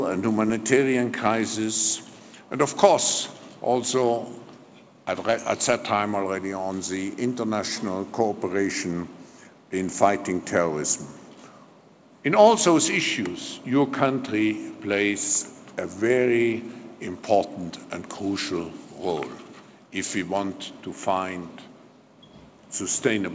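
Nothing's actually wrong here; the audio just carries the band-limited sound of a call path, with nothing above about 8 kHz, which fits a G.722 codec at 64 kbps.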